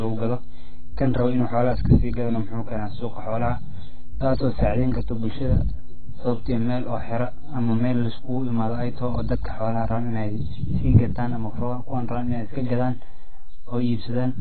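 A speech recording with three technical faults. Throughout, the waveform has a DC offset: the whole trace sits shifted off the zero line by a constant amount. It cannot be heard directly, but it eats into headroom, shows as an uneven gap between positive and negative peaks, and appears as steady energy in the lowest spectrogram bin. The speech is also dull, smeared and fizzy, and nothing reaches above 4.5 kHz. On a spectrogram this shows as a hard ceiling. The heavy damage points to a very low bitrate, around 12 kbps, and the likely cause is AAC compression. From 0.00 to 9.91 s there is mains hum, a steady 50 Hz tone nearly as loud as the speech itself. It appears as a bright horizontal line at 50 Hz with some low harmonics, and it stops at 9.91 s.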